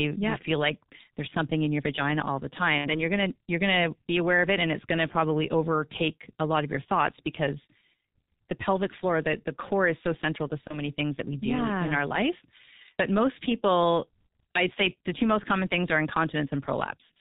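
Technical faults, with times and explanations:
throughout G.723.1 codec: The speech is muffled and hoarse, with nothing bright above 4 kHz and consonants smeared into one another. The damage is heavy, which fits a G.723.1 coder running at about 6.3 kbit/s. It cuts the signal into 30 ms frames and updates its model of the vocal tract only slowly, so quick articulations blur and fine detail gives way to a hoarse texture.
2.78–2.97 s and 10.67–10.81 s, VoIP packet loss concealed by the speech codec: Twice the voice is stretched out and fades, and then comes back weak or distorted. The first time is after "your vagina all the", recovering by "you're going to you're". The second is after "is so central to", recovering by "things that we do". The decoder filled each missing stretch by repeating its last pitch and filter at falling gain. The first gap fits about 60 ms of lost frames and the second about 30 ms. 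Each frame builds on the one before, so the distortion outlasts the gap.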